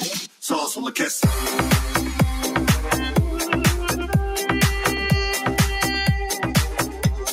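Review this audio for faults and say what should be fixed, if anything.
A noise suppressor meant for speech has been left on for the whole clip, so the suppressor is acting on music or other sounds. It mistakes steady tones, ambience and reverb tails for noise. It keeps turning them down and letting them back up. The level swings by about 5 dB as a result. Attacks come through, but sustained parts sink. The sound pumps and thins out.

There are two places where the noise suppressor cuts the sound harder. From 0.21 to 0.44 s it pulls the level down by up to about 11 dB, for roughly a fifth of a second. From 6.89 to 7.04 s it cuts by up to about 6 dB, for about 0.15 s. In both spots steady or decaying material drops away while sudden sounds mostly survive.

To prevent this, bypass speech noise suppression on the channel whenever music or other non-speech audio is being captured.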